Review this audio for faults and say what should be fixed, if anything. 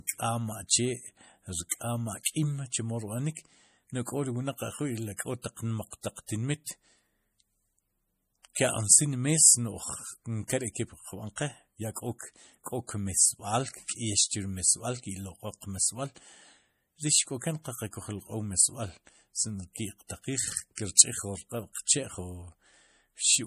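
MP3 compression, throughout the speech: the audio sounds watery and swirly, with a metallic edge on s sounds, and nothing is present above 15.2 kHz. The likely cause is MP3 encoding at a low bitrate, fitting about 40 kbps. At that rate the encoder lacks bits for every frequency line, so it removes the top band and drops quiet components frame by frame. Those components flicker in and out, which produces the swirl. To prevent it, keep a lossless master or encode at a much higher bitrate.

Pre-echo, at 1.69 to 1.71 s, 2.23 to 2.26 s and 5.42 to 5.44 s: a brief hiss lasting 23 ms, 29 ms and 25 ms respectively comes just before sharp onsets, and those onsets sound softened. The codec spreads its quantisation noise across the whole transform block. Where an attack falls late in a block, noise sized for the loud part also fills the quiet gap ahead of it. To prevent it, encode at a higher bitrate with an encoder that switches to short blocks on transients.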